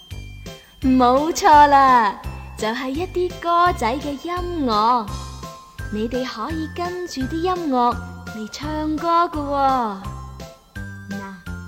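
Nothing stood out on listening; no technical faults could be heard at any point in the audio.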